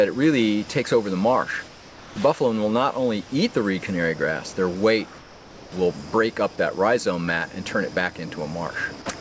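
From 1.68 to 2.16 s and from 5.18 to 5.72 s, comfort noise replaces the background. It turns steady, featureless and about 4 dB quieter, likely from discontinuous transmission. At 9.20 s, the voice detector drops the last 10 ms of sound. Steady noise takes its place, likely because the detector mistook that tail for background.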